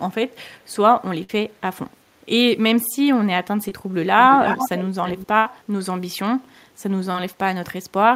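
A burst of packet loss runs from 1.23 to 1.30 s. Roughly 50 ms of the speech never arrived in time, so the receiver carried the last sound forward for about 53 ms, fading it as it went. This gives a short held buzz or fading hiss before the speech picks up again with that stretch missing. The same happens from 5.38 to 5.46 s, where about 70 ms is lost and the concealment stretches to about 73 ms.

Short concealed packet loss occurs at 3.69 to 3.72 s and again at 7.11 to 7.15 s. In each case about 30 ms failed to reach the decoder, and the receiver patched the hole by extending the preceding sound before blending back into the real signal, over about 22 ms and 28 ms respectively. The result is a brief smear or wobble rather than an obvious dropout, and a short consonant there may simply disappear.

An echo leak appears from 4.19 to 4.85 s and again from 5.05 to 5.28 s. A copy of the speech returns about 321 ms late, in the first stretch only a little quieter than the speech itself, and in the second much fainter. 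The likely cause is a loudspeaker at one end whose echo canceller failed to strip out what its microphone picked up, sending that delayed copy back into the call.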